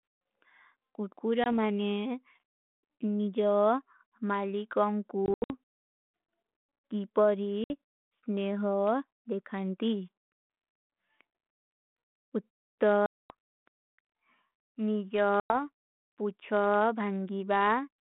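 Speech on a G.726 ADPCM line, confined to about 200 Hz to 3.5 kHz with light coding grit that fits 32 kbit/s, shows packet loss on an ADPCM call at 1.44 s (20 ms), 5.26 to 5.51 s (160 ms lost, scattered, longest gap 80 ms), 7.64 s (60 ms), 13.06 to 13.33 s (240 ms) and 15.40 to 15.55 s (100 ms). Each hole is hard-edged silence. Afterwards the decoder's predictor and step size no longer match the sender's, so speech resumes with brief distortion before resettling.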